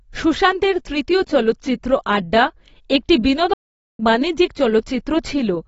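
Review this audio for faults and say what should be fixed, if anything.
The speech is band-limited throughout, and the upper range sounds dull and smeared, with a fizzy, warbling texture on sibilants. The likely cause is AAC compression, with an AAC-LC encoder at a low rate that fits roughly 24 kbps. To stay within that budget, the encoder dropped the top of the spectrum and quantised the remaining bands coarsely against its hearing model. Fix it by encoding at a higher bitrate, around 64 kbps or more for speech.

From 3.53 s to 3.99 s the speech cuts to silence for about 0.46 s, then resumes. This is a playback stall, likely caused by the player draining its buffer or having its audio thread blocked, so it had no samples to output until data or scheduling recovered. Prevent it by enlarging the playback buffer and keeping the audio thread free of blocking work.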